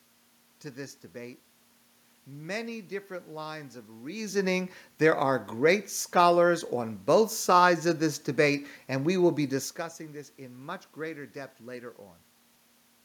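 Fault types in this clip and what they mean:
Nothing here points to a system fault: the room noise belongs to the space itself, and the level shifts around 4 s and again near 9.5 s are just the talker moving relative to the microphone.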